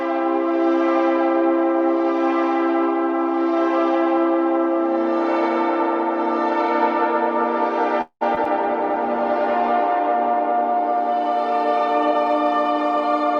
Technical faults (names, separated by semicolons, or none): call audio freeze; short concealed packet loss; call bitrate drop; jitter buffer speed-up